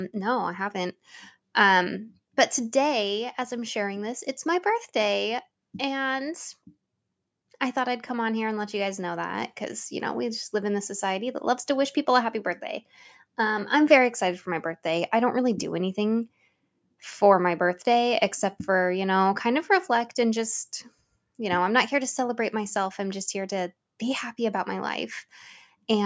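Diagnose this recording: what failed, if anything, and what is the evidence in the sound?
Nothing failed; call microphone processing works as intended.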